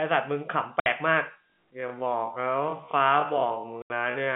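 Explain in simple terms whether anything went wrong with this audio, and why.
A couple of things went wrong. First, there's packet loss filled with silence: bits of the stream never arrived, and the receiver played nothing in their place. You hear sudden gaps with hard edges at 0.80 to 0.86 s and 3.82 to 3.90 s, lengths that fit three and four lost 20 ms packets.

Second, from 1.36 s to the end there's a time-stretched section. The pace drops abruptly to roughly half speed while the pitch stays put, so it drags. That's likely software padding the audio out to fill a length.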